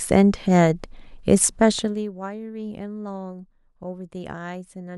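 From 1.75 to 2.1 s, the speech drops by roughly 20 dB, and zipper noise rides on the fade. The gain moves in 1 dB steps with no smoothing between them, about a hundred steps a second. Each jump puts a small click into the waveform. Together the clicks form a fast, buzzy ticking under the speech while the level falls.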